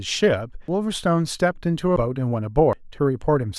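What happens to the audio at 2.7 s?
A dropped buffer (overrun) occurs at 2.73 s: the speech jumps abruptly, skipping around 150 ms. The likely cause is that the samples weren't collected before the hardware overwrote them, so the surrounding audio is spliced directly together without any gap.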